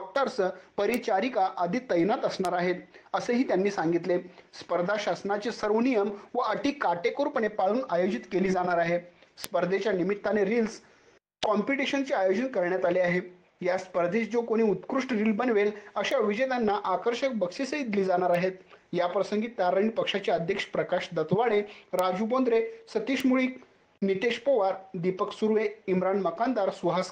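Sharp single ticks occur at 0.94, 2.45, 9.44, 16.11, 18.35, 21.99 and 23.20 seconds. Each is a bit error spike. A flipped bit throws one sample, or a few in a row, far off by a power of two before it snaps back. The result is a bright, broadband click unrelated to the surrounding sound.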